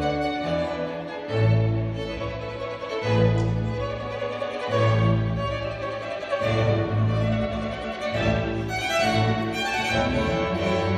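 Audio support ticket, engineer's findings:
Listened through the whole thing and nothing jumped out, so there's no fault to log here.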